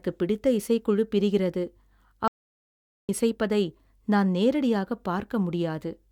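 At 2.28 s the speech cuts to silence for about 0.81 s, a playback stall, likely from the player running short of data, resuming at 3.09 s with "இசைப்பதை நான் நேரடியாகப்". Unlike a brief dropout, the silence is long before the sound resumes.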